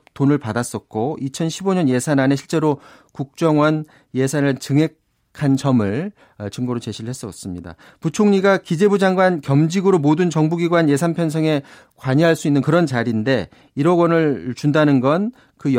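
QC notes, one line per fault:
No faults found on the speech track.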